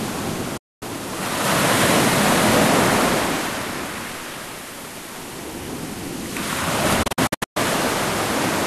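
At 0.57 s the sound fades out within about 8 ms. It stays silent until 0.83 s. This is a digital broadcast dropout. The receiver muted when frames were lost. From 7.03 to 7.57 s, a second dropout breaks into several short holes. The longest is 120 ms.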